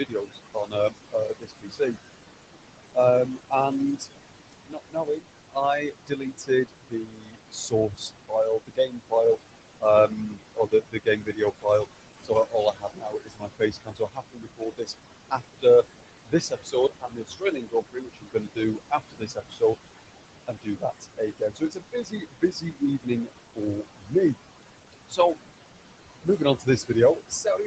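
Noise suppressor artifacts run through the whole clip: the room noise, sitting only about 9 dB under the speech, gets pulled down by about 21 dB between phrases and swells back under them.

Speech cut by the noise suppressor shows up in four stretches: 0 to 1.97 s (about a second affected), 2.94 to 19.76 s (around ten seconds), 20.47 to 25.36 s (roughly two seconds), and 26.23 s to the end. The suppressor mistakes quiet speech for noise, dropping it by up to about 22 dB (about 19 dB in the last stretch), so soft consonants and word endings sound swallowed.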